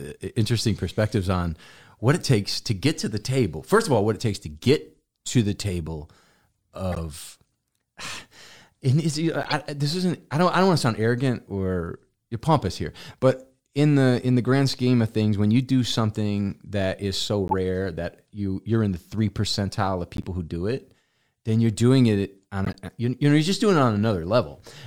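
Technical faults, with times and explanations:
6.92 to 22.76 s, corrupt frame decoded: short bursts at 6.92–6.99, 9.43–9.53 (after "and it's"), 17.48–17.54 (after "something that is so"), 20.17–20.25 (before "who do it then") and 22.65–22.76 s. Damaged compressed frames were decoded anyway, so a few frames each time put energy at wrong frequencies, heard as chirps or noise blips peaking around -10 to -20 dBFS.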